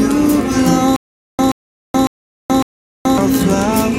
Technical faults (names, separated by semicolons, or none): stutter with silent gaps